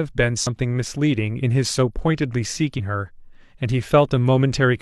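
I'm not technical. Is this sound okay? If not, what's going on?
No, not quite. There are two brief glitches from damaged data in a compressed stream: a quick glitch at 0.47 s and a short glitch from 2.74 to 2.81 s. Some of the compressed speech data got garbled, so the player stumbled until it found clean data again.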